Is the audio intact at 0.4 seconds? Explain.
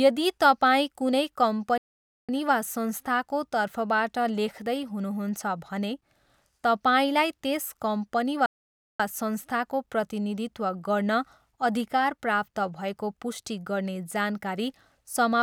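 Yes, the audio is intact at 0.4 seconds, with no fault audible at that moment.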